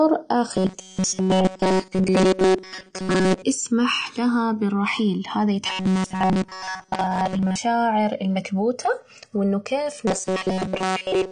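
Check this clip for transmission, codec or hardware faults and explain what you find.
Three faults are present: a recurring metallic buzz, a dull band-limited codec sound throughout, and a slow flanging between the two channels.

Robotic sound from repeated short buffers, at 0.54–3.43 s, 5.66–7.58 s and 10.07–11.31 s: a rigid, metallic 188 Hz buzz. The likely cause is a repeated segment of about 5.3 ms filling for late audio, mostly in the first and last spans and entirely in the middle one.

AAC compression, throughout: dull, smeared, warbly speech with nothing above 9.7 kHz, likely from AAC-LC at a low bitrate around 32 kbps.

Channels drifting apart, throughout: a slow flanging sweep when the channels are heard together. Clocks differing by roughly 150 ppm let the inter-channel delay creep up to about 2 ms.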